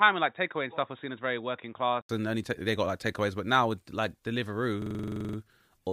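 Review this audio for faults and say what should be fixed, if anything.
The input was likely switched to a poorer device for the opening: from 0.0 to 2.09 s the sound has nothing above 3.8 kHz, sits about 5 dB lower, and carries noise roughly 50 dB down. An 80 ms silence then precedes the clearer "and only they got". To prevent this, lock the recording input to one device and disable automatic switching to headset call profiles.

A system hang loop runs from 4.82 to 5.38 s: the driver froze while the hardware kept replaying one 42.67 ms buffer, which fits 2048 samples. That buffer repeats 13 times, at a loop rate of 23.4 Hz. To prevent it, find and fix the driver or system stall, and use audio drivers that mute output rather than cycle the buffer when the host stops responding.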